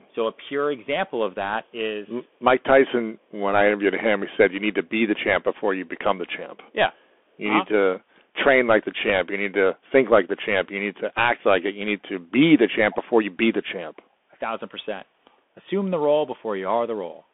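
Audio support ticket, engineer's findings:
Bluetooth CVSD headset codec, full clip: speech band-limited to roughly 200 Hz–3.5 kHz, nothing above 3.8 kHz. Scratchy sibilants, granular hiss beneath speech, slope-overload distortion on loud bright peaks. Consistent with 64 kbps one-bit delta modulation on a headset link.

Echo leak, 12.91–12.96 s: brief faint delayed copy of earlier speech, about 0.52 s behind the original, well below speech level. Likely cause: far-end loudspeaker pickup not fully removed by the echo canceller, residual returned on the line.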